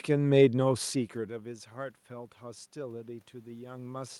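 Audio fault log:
Nothing wrong turns up here; the background noise is just the room itself, and the level shifts around a second in and again near three and a half seconds are only the talker moving relative to the mic.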